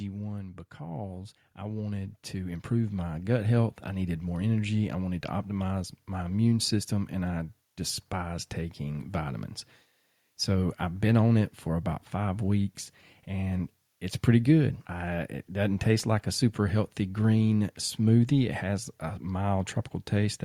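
From 0.05 to 0.75 s the speech starts loud and then drops. This is automatic gain falling. The gain control judged the opening level too hot and began pulling its gain down. The cut is small, about 3 dB. It spreads over roughly 0.7 s, so it sounds like a quick sag rather than a jump. The background falls with the speech, because the whole signal is scaled at once.

Straight after, from 0.77 to 4.23 s, comes automatic gain rising. The control now finds the level too quiet. It raises its gain slowly, by about 11 dB in total. That is a large lift, spread across almost 3.5 s. Speech and room noise swell together, steadily. The climb settles just before "more energy I wanted", where the level stops changing.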